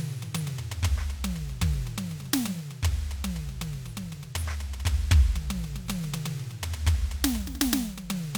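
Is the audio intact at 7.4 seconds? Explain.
Yes, the music plays through cleanly at 7.4 seconds, with no dropout, click, distortion or other fault at that moment.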